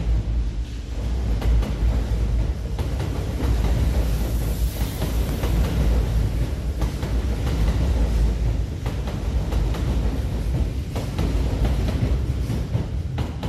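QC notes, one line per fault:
Throughout: MP2 compression, dull and gurgling with granular distortion as upper sub-bands drop in and out, likely from starved bits near 80 kbps rather than MP3 pre-echo.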